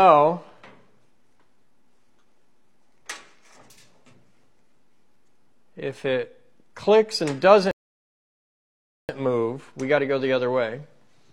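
At 7.71 s the sound halts and falls into silence until 9.09 s, a rebuffering stall that inserts about 1.38 s of dead air. The player used up its downloaded audio and waited for more before continuing. What separates this from a dropout is the resumption: playback picks up at exactly the point it froze, so nothing is skipped or missing. The gap only lengthens the timeline rather than deleting any material.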